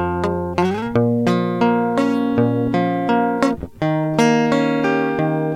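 From start to finish, the music was most likely reduced to a coarse word length and rounded without dither, with grain that fits about 10 bits. Because the rounding error tracks the signal rather than being randomised, it takes the form of distortion, roughly 45 dB below the music. Quiet passages and decaying tails sound gritty and rough, and the faintest detail either vanishes or sputters between adjacent levels. This is low bit depth without dither.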